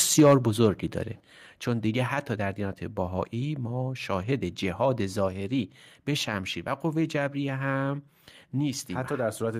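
At 1.2 s the microphone volume stepped down: speech and background noise drop together by about 7 dB in a single step. Likely the call software judged the input too hot and cut the device's input gain. On a waveform the envelope narrows abruptly there, and a spectrogram shows every band darkening at once.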